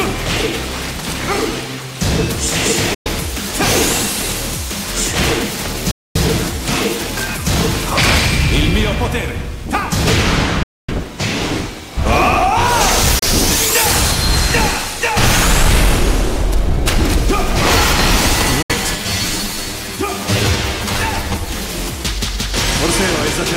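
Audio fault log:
2.94–3.07 s, 5.91–6.16 s, 10.63–10.91 s, 13.19–13.23 s, 18.62–18.72 s: Bluetooth dropout. The sound cuts to silence, then resumes further on, as if it had kept playing. This is likely late packets being dropped on the wireless link. Unlike an edit or skip, nothing is repeated and the timeline keeps running.
18.96–21.48 s: channel delay (comb filtering). One channel runs about 10 ms behind the other, and the two are summed to mono. The shared content cancels at evenly spaced frequencies from around 50 Hz upward. The notches stay fixed, unlike a sweeping flanger.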